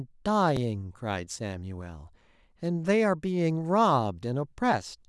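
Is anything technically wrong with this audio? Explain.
Yes, there is one fault. At 0.57 s a repeated buffer occurs: late data made the device replay a 5.33 ms block, which fits a 128-sample buffer, giving a brief click. The waveform shows a duplicated segment with a hard seam, and the spectrogram shows a thin vertical line.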